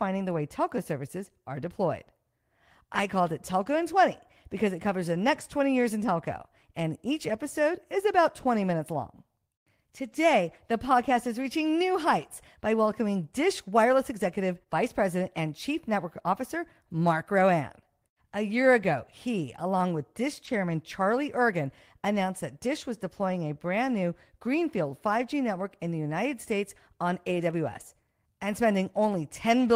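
At about 20.45 to 20.49 s the speech briefly smears, a short wobble where a tiny sound can drop out. This is short concealed packet loss: 20 ms of audio arrived too late, so the receiver extended the preceding sound to fill the gap before blending back in.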